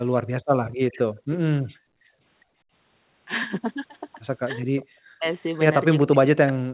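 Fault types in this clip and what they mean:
Background gated by the echo canceller: room sound drops by about 39 dB at 0.42 s, 1.12 s and 1.71 to 2.73 s while the far end plays, then returns.
Echo leak: a faint copy of the speech, about 20 dB down and delayed roughly 0.4 s, appears near 0.66, 1.31 and 4.76 s, likely residual echo passing the canceller.
Speech suppressed in double talk: the talker's speech drops by around 40 dB from 4.89 to 5.26 s and from 6.02 s onward, likely the canceller attenuating both sides.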